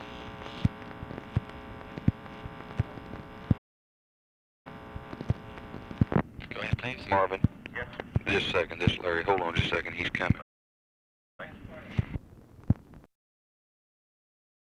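At 3.57 s and 10.41 s, playback stalls. The sound stops dead for about 1.1 s, then 1.0 s. The player likely ran out of data.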